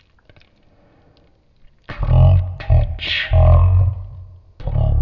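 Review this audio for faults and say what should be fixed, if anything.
The speech plays extremely slow and deep from start to finish, dragged to about a third of its natural pace and lowered by about 19 semitones, more than an octave and a half. This is a wrong sample rate fault: the samples are played back at a different rate than the one they were captured at, with no conversion. Speed and pitch fall together by a factor of three, which fits 48 kHz audio being played as if it were 16 kHz. To prevent this, check that the playback sample rate matches the file's rate, or resample to the device's rate before playback.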